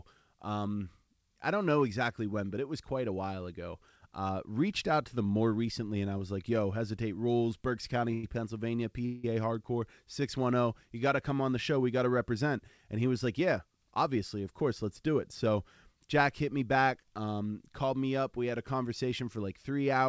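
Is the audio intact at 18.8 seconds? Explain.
Yes, the audio at 18.8 seconds is intact, carrying only the ordinary band limit of the G.722 call path, with nothing above 8 kHz.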